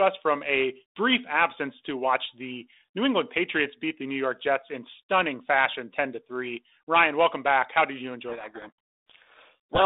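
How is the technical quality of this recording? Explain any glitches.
The recording has one clear fault near the end. It travels over a G.726 ADPCM telephone path, with a band of roughly 250 Hz to 3.7 kHz and only light coding noise, which fits 32 kbit/s G.726.

From 8.28 s to 9.82 s, right after "did you", there is a codec payload misread. The receiver unpacks each G.726 code word with its bits in the wrong order, so the decoder applies the wrong difference values to its prediction. The speech is buried under harsh, rasping distortion until just before the clip ends.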